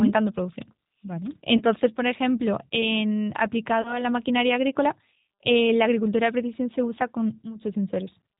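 Throughout, the speech carries G.729 codec damage at 8 kbit/s, plainly audible. The decoder rebuilds each frame from a vocal-tract filter, pitch predictor and sparse pulses, giving a rough, slightly synthetic texture with nothing above 4 kHz. Unlike simple low-pass filtering, the roughness comes from the coarse excitation, not only the lost treble.

From 1.57 to 1.64 s, just before "por ejemplo en", VoIP packet loss concealed by the speech codec stretches the last sound into a fading buzzy tone or coloured noise. About 30 ms is missing, which fits a single lost packet. The same happens from 3.82 to 4.05 s, between "por ejemplo en" and "maquinaria agrícola eh la", where the voice stays weak past the gap. A silent dropout would cut cleanly instead.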